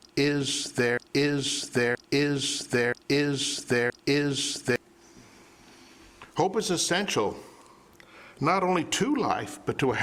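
The audio opens already caught in a broken-record loop. A fragment of about 0.98 s repeats exactly, back to back, four times. The loop runs from the very start to 4.76 s, when normal playback resumes. Each pass is identical, with no variation between repeats. Whatever should have played during those seconds is gone. The likely cause is a player, encoder or stream that stalled and kept resending the last fragment in its buffer.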